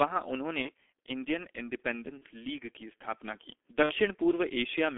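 Muffled, hoarse speech with smeared consonants runs through the whole recording, confined to roughly 300 Hz to 3.4 kHz and heavily degraded, the mark of the G.723.1 codec, whose coarse 30 ms frames and slow voice model fit a bitrate around 6.3 kbit/s. Three brief fading smears interrupt it at 0.62–0.71 s, 2.18–2.24 s and 3.83–3.93 s. This is VoIP packet loss concealed by the speech codec: the decoder stretches its last pitch and filter across the gap, which fits one lost 30 ms frame in the first two cases and two frames (60 ms) in the third.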